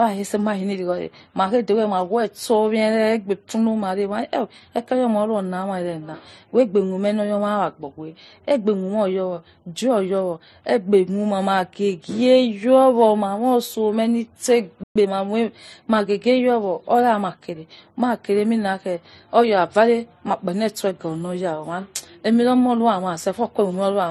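From start to finish the speech has a limited bandwidth, and two layers of artefacts sit on top of each other and are heard together. This is likely transcoding between lossy codecs. The character points to a low-rate MP3 of roughly 38 kbit/s that was then re-encoded as AAC-LC at around 48 kbit/s. The second encoder spent its bits reproducing the first one's damage and added its own, and the lower of the two bandwidth limits carried through.

At 14.83 s, right after "ma moi osomeh nitse", the speech drops out into silence for 120 ms. It resumes at 14.96 s. The sudden gap in mid-flow is a playback stall, and its likely cause is the player running short of buffered data or having its output thread held up.

From 14.96 s to 15.08 s, the speech that follows the gap sounds rushed. It runs at twice normal speed but keeps its pitch. This is time-compressed catch-up. To absorb the 120 ms backlog left by the stall, the player removed small slices of the signal and cross-faded the remaining pieces together. 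That packs the delayed material into the next 120 ms and brings playback back into step.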